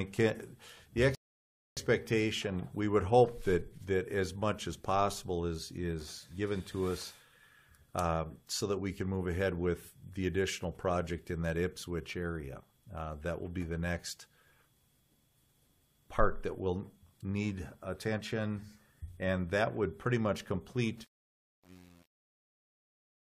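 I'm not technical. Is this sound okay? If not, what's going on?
No. At 1.15 s the audio stops dead and goes silent until 1.77 s, then picks up exactly where it left off. This is a rebuffering stall: the player ran out of downloaded audio and waited for more. Nothing is missing, but about 0.62 s of silence is added.

From 20.97 s to the end at 23.35 s, the closing fade-out, which begins around 21 s, turns gritty instead of dying away cleanly. This is truncation distortion on a fade. The volume stage keeps too little detail, which fits an 8-bit stage with no dither, so the quiet tail becomes coarse steps.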